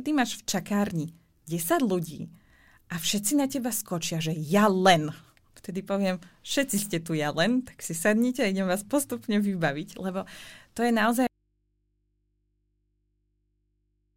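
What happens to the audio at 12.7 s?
At 12.7 s the clip is inside an audio dropout to a faint residue that begins abruptly at 11.27 s, right after "vybaviť lebo to je", and runs to the end. The speech cuts off mid-flow and only a low mains hum remains, some 45 dB below the signal level. That is most likely a lost source feeding a downstream stage that stayed live, leaving its open input to pick up hum.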